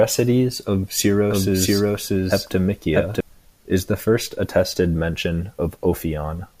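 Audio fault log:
1.30–3.20 s, doubled audio track: a second, equally loud copy of the speech trails roughly 0.7 s behind, dry and full-band, starting and stopping abruptly. This is likely the same signal captured twice through a slower path, or an edit leaving two copies out of step.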